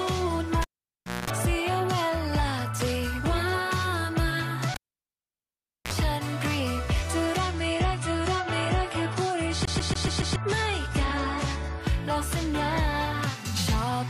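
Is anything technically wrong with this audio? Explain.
Yes, there are three kinds of fault.

Cable pulled and plugged in, at 0.62 to 1.30 s and again at 4.74 to 5.93 s. A live connector is pulled out and reseated, so the signal path breaks and then re-forms through a partial contact. Each event opens with a pop and falls to near silence, about 0.64 s the first time and 1.14 s the second. A 60 Hz mains buzz follows while only the tip touches, about 0.22 s and then 0.05 s, before a second pop brings the sound back.

Adaptive stream at a lower bitrate, from 7.39 to 11.81 s. The connection slowed, so the player switched to a leaner encoding. That fits a step down from about 96 to 32 kbit/s AAC. With fewer bits available, the encoder discards everything above 11.5 kHz and coarsens what remains. The treble abruptly goes dull, with codec artefacts becoming more noticeable. There is no gap at either switch, only a sudden change in quality and then a return to the fuller sound.

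CD stuck on one turn, from 9.65 to 10.36 s, inside the low-bitrate stretch. A scratch kicks the laser back to the same spot on each revolution of the disc. The same 141 ms fragment therefore plays five times in a row, with a brief mute at every jump back. The result is the rapid, perfectly regular stutter of a skipping CD.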